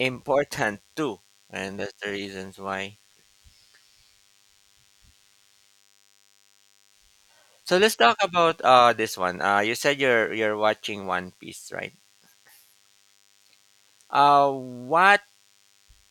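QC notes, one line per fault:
Throughout: DECT cordless phone buzz. A thin, steady 100 Hz buzz sits about 40 dB under the speech. Nearby DECT bursts every 10 ms get rectified.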